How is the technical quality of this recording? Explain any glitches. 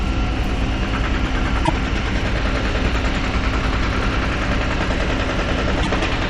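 Two short glitches break into these everyday sounds, at 1.65 to 1.70 s and at 5.82 to 5.87 s. Each lasts about 50 ms, roughly two frames of 24 ms. The likely cause is a broken MP3 bit reservoir: after a cut, the next frame borrows bytes from earlier frames that are gone, so it decodes garbage and the sound skips ahead with a brief chirp, noise burst or short hole. On a spectrogram each shows as a narrow vertical disturbance. The waveform has an abrupt discontinuity there.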